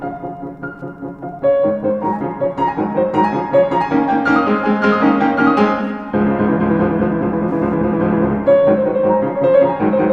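Throughout the clip a faint, steady ticking runs under the sound at a little under ten ticks per second, one every 102.4 ms, sitting very low, roughly 50 dB below the signal. This is Wi-Fi interference: a nearby access point's beacon transmissions are being picked up and rectified by the audio circuitry, so each beacon becomes an audible click. The strict 102.4 ms spacing separates it from GSM buzz, which pulses far faster as a rasping 217 Hz drone.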